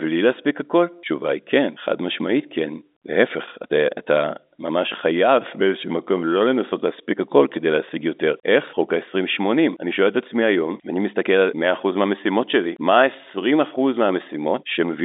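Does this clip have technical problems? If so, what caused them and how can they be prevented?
No, nothing stood out on listening; the speech simply has the narrow, telephone-line sound of G.711 coding.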